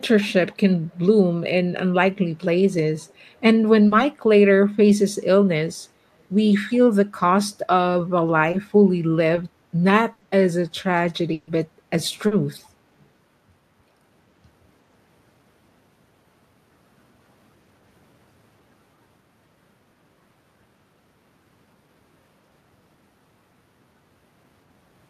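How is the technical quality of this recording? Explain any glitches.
The recording is speech, and it carries several glitches: two faint echo leaks, four short concealed packet losses and two bursts of packet loss.

At 3.08 s and again at 13.0 s there is an echo leak. For about 60 ms each time, a very faint delayed copy of the talker comes back, trailing the original by about 0.36 s. It sits far below the direct speech. The likely cause is a far end on loudspeaker whose echo canceller let some of its microphone pickup slip back into the call.

Short concealed packet loss occurs at 3.87 s, 8.51 s, 9.35 s and 12.27 s. The holes last 40 ms, 20 ms, 20 ms and 40 ms. Each time a small piece of audio arrived too late for the decoder. The receiver stretched the preceding sound across the gap, then blended back into real audio. Each one sounds like a quick smear or wobble, and a brief consonant can drop out.

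A burst of packet loss hits at 10.13 s for 80 ms and at 11.33 s for 140 ms. Here several packets in a row failed to arrive. The receiver kept extending the last sound while fading it down. Voiced sound turns into a held buzz, unvoiced sound into a dying hiss. Speech then picks up further along, with that stretch simply gone.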